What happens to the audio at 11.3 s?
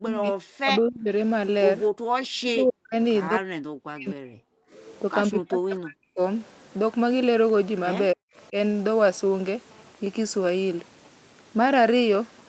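At 11.3 s the speech is intact, with no dropout, glitch or other fault, only the steady call-path band limit that leaves nothing above about 8 kHz.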